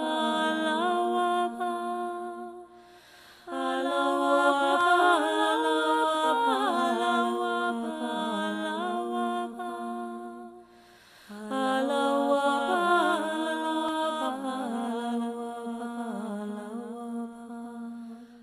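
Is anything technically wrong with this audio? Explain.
Yes. At 4.81 s and 13.89 s the sound jumps ahead. The first skip is tiny, the second longer, near a few hundredths of a second. This is likely a dropped buffer (overrun): samples were overwritten before being read, so the edges join directly without silence.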